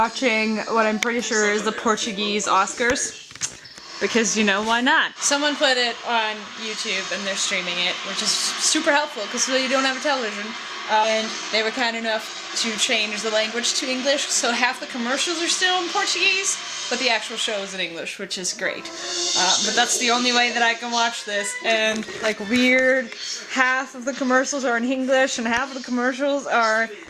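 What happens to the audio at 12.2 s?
At 12.2 s the audio is running faster than normal while keeping its original pitch, so it comes across as hurried. This is a jitter buffer speed-up lasting from about 11.15 s to 14.81 s, playing at 105% speed. The receiver's jitter buffer had built up more audio than its target, so it trimmed away short slices one or a few pitch periods long, over and over, cutting roughly a fifth of a second in total to bring the delay back down.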